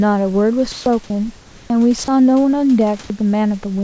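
From 0.72 to 0.86 s the speech pauses and the room background gives way to comfort noise: a steady, featureless hiss about 3 dB louder than the real background, likely filled in by the receiver after discontinuous transmission stopped the sender. From 1.04 to 1.10 s sound is dropped by the voice detector. About 30 ms of sound was likely misjudged as background and not sent, so a brief patch of steady noise stands in for it. From 1.36 to 1.70 s a longer stretch of comfort noise replaces the background, about 5 dB quieter and without its texture. At its end, from 1.68 to 1.70 s, the onset is clipped by the voice detector. The first 20 ms were likely missed, so the next word starts abruptly. From 2.04 to 2.08 s a second dropout likely loses another 30 ms of sound to the detector. Throughout, the call codec leaves nothing above 8 kHz.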